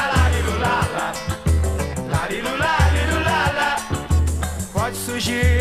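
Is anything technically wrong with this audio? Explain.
No, nothing technically wrong can be heard anywhere in this audio.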